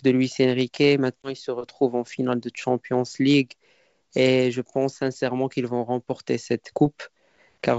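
At 1.23 s, packet loss on an ADPCM call cuts a hard-edged 20 ms gap into the speech, about one packet. Afterwards, until 1.35 s, the mismatched predictor brings speech back slightly distorted.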